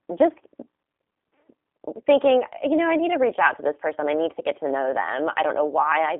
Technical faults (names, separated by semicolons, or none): G.729 codec